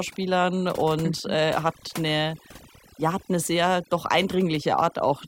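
From start to finish the recording has overdone noise removal. The denoiser was set too hard, so every frequency band that sits close to its idea of the noise floor gets pushed way down or cut out, and the softer bits of the speech get thrown out along with the noise. That leaves the background lower and broken up into little twinkly specks.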